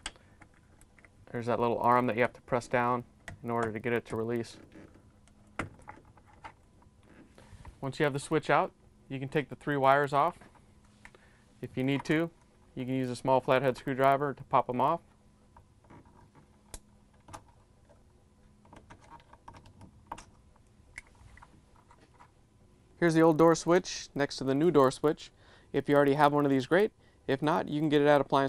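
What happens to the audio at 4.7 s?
At 4.7 s the resampler is restarted on every block, as it is throughout the clip. Each 40 ms block is converted from 24 kHz to 48 kHz in isolation. Its edges lack true neighbouring samples, leaving a small error every block and a 25 Hz tick-buzz that rides on the signal.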